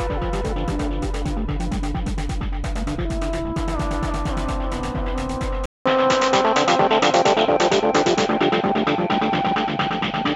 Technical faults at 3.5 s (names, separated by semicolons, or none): none